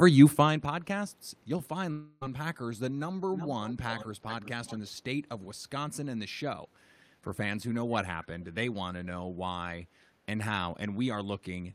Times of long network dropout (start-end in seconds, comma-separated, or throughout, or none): 1.91-2.23